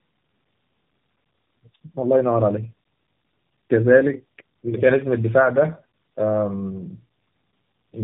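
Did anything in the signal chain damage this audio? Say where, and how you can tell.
Yes, at the codec stage: tandem speech coding runs through the whole clip. The speech has a rough, muffled and warbly quality, with nothing above 3.6 kHz. That sounds like two low-rate speech coders in series, which fits a G.729A leg followed by an AMR-NB leg with a G.711 hop between them. Each border decodes and re-encodes, so the second coder models artefacts the first has already baked in, and the distortion compounds.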